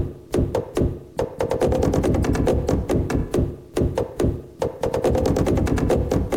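The signal was likely reduced to a very coarse bit depth and truncated without dither, so the rounding error tracks the waveform instead of being spread out as noise. The result, heard throughout, is low bit depth without dither: a grainy, gritty distortion that shifts with the sound and sits around 45 dB below it, which fits roughly 9-bit truncation. Quiet passages and decaying tails turn rough and sputtering rather than fading smoothly.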